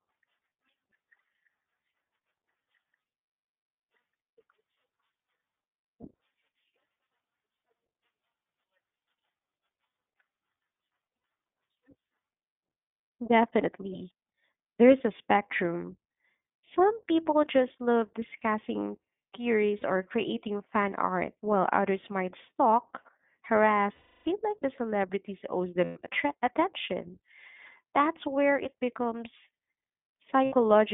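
The whole clip runs through the iLBC codec, clipped to about 150 Hz to 3.6 kHz and plainly rough and synthetic, consistent with the 15.2 kbps, 20 ms-frame mode. Lost iLBC frames hit at 6.16, 11.19, 19.78, 23.92, 25.84 and 30.44 s. The decoder stretches the last pitch cycle into a buzzy held vowel, longest around 24 s, then snaps straight back.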